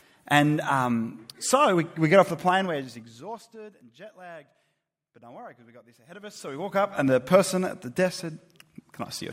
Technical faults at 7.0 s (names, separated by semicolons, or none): zipper noise